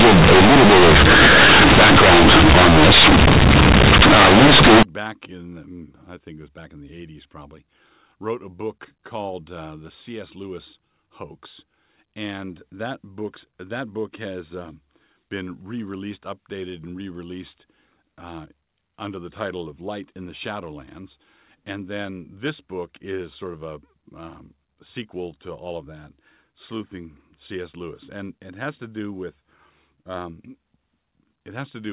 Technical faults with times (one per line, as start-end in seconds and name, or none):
0.00-4.83 companded audio read as linear